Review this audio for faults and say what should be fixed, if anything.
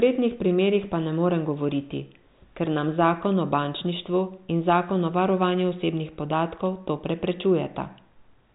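Nothing needs fixing: the speech has no faults, and its band stops near 3.8 kHz, consistent with a G.726 ADPCM telephone path at a high rate such as 40 kbit/s.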